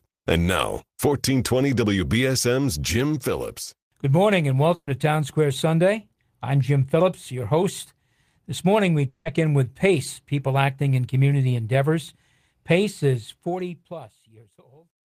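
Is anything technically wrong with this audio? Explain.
Yes, there are three distinct problems, spread through the clip's speech.

The first is a burst of packet loss at 4.75 to 4.90 s. Several packets in a row didn't arrive in time, so the receiver kept playing the last bit of sound it had for about 120 ms, turning it down as it went. That comes across as a short held buzz or hiss that fades, with about 50 ms of silence. When speech resumes, about 120 ms of audio has been skipped over, so there's a small jump.

The second is at 9.07 to 9.28 s, and it sounds like a long network dropout. The concealment runs for about 180 ms, a buzz or hiss carried on from the last sound and fading, and there's no silent stretch before the speech comes back. Another 180 ms or so is simply missing. The cause is likely a network outage rather than anything at the recording end.

The third is truncation distortion on a fade. 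In the fade-out near the end, from 13.16 s to the end the level stage is running at only about 12 bits with no dither. As the fade gets quieter, the waveform collapses into a few coarse steps. It turns grainy and gritty, and from 14.61 s on it's at its worst.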